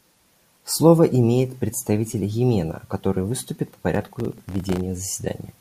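From 3.95 to 4.81 s the speech carries processor overload crackle: dozens of missed deadlines in a row, each leaving a tiny silent gap, which fits buffers of about a millisecond and a half. Unlike a single dropout, the result is a dense gritty tearing that stops abruptly once the load passes.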